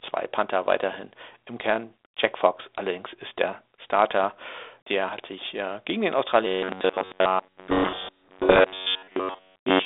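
Right after "sich äh gegen den", at 6.47 s, the speech turns into a rigid, metallic buzz pitched near 94 Hz. It roughly tracks the syllables and persists to the end of the clip. This is robotic sound from repeated short buffers. The likely cause is audio arriving too slowly, so the playback side keeps looping a fragment of about 10.7 ms instead of waiting. That stamps its own fixed pitch on the sound while most of the real material is dropped.

From 7.7 s to 8.6 s, on top of the buzz, the speech sinks under harsh, grinding distortion. This is a codec payload misread. The G.726 code words arrive with their bits in the opposite order from what the decoder expects. Every 4-bit sample still decodes, but to the wrong difference value, so the adaptive predictor drifts and spits out rasping noise instead of the narrowband telephone signal carried at 32 kbit/s.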